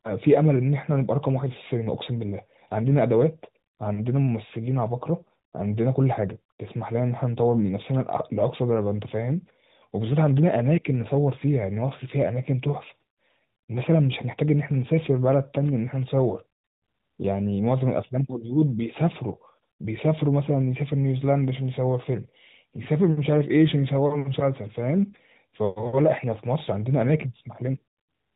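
Nothing stood out as a technical fault on listening to this speech recording.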